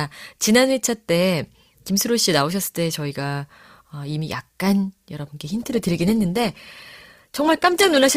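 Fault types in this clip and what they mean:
Adaptive stream at a lower bitrate: from 5.45 s to the end, the speech abruptly takes on more codec artefacts with no gap at the switch, consistent with the stream stepping down from about 64 kbit/s to 16 kbit/s Opus.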